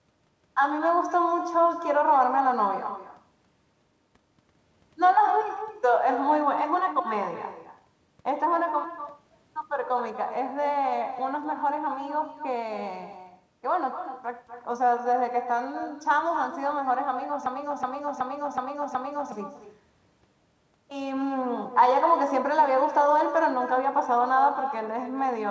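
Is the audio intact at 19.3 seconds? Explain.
No. At 19.3 seconds you're right at the tail of a system hang loop that runs from 17.46 to 19.32 s. The machine or its driver froze while the sound hardware kept cycling the same ring buffer, so one 0.37 s chunk plays five times at about 2.7 repeats a second. That's the choppy, machine-gun stutter you hear. The loop length fits a 16384-sample buffer, and around two seconds of real audio are gone underneath it.

Layered over all of that, and through the whole clip, there's echo with no canceller. The far end picks up its own loudspeaker and nothing strips it out, so the talker's voice comes back roughly a fifth of a second later as a thinner shadow about 11 dB down.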